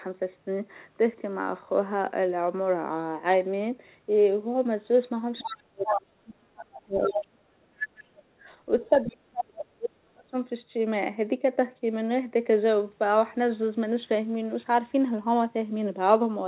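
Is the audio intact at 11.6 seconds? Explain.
Yes, the speech is intact at 11.6 seconds, with nothing there beyond the steady narrowband sound of a G.711 call path that carries nothing above 4 kHz.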